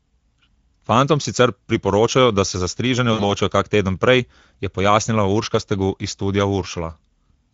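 Throughout, the speech sounds hoarse and grainy, the plainly audible damage of the Speex codec, whose lean excitation coding fits a bitrate around 17 kbps. From 3.13 to 3.33 s, the speech smears into a fading buzzy tone or coloured noise: VoIP packet loss concealed by the speech codec, which extrapolates across roughly 60 ms of missing audio.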